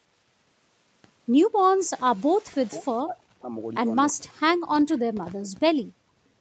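This speech clip, with nothing above 8 kHz as expected from a wideband Opus call path, has the talker's voice sinking sharply three times: from 2.43 to 2.85 s, from 3.03 to 3.52 s, and for a long stretch from 4.12 to 5.8 s, where it falls by around 40 dB. This is likely speech suppressed in double talk. With both ends speaking together, the echo canceller could not tell this talker from the loudspeaker echo and turned the whole microphone signal down. Just before that long dip, from 4.09 to 4.13 s, a faint, brief scrap of a delayed copy of the voice comes through, roughly 25 dB below the speech and trailing it by 324 ms. That is likely an echo leak: the far end's echo canceller did not fully remove what its microphone picked up from its loudspeaker, so a remnant was sent back. Finally, from 6.08 to 6.15 s, the room sound drops out for about 70 ms, falling by about 24 dB before returning. 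This is background gated by the echo canceller. While the loudspeaker was active, the canceller clamped the microphone hard and cut the ambient noise along with it, then released it a moment later.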